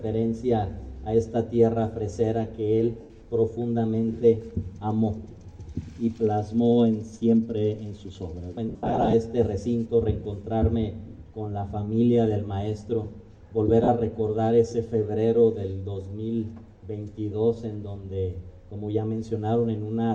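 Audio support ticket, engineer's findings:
Lost LE Audio frames, three spots. 3.01–3.10 s: about 90 ms of noisy smear, tones go grainy. 8.69–9.14 s: scattered dropouts totalling about 270 ms over 440 ms, longest run roughly 70 ms. 13.84–13.89 s: short 40 ms smear. Gap lengths fit 10 ms LC3 frames. The decoder fills each gap by repeating the last good spectrum with random signs, so it comes out noise-like. Likely the BLE radio link. Light lossy compression is also audible.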